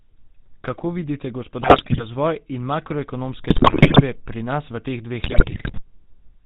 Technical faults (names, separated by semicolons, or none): GSM full-rate codec; GSM bit errors